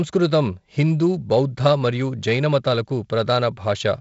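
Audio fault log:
No faults found; the speech passes through G.722 wideband telephone coding at 48 kbit/s, with content stopping near 7.7 kHz, a light hiss in the upper band and a slightly noisier lower band at this rate.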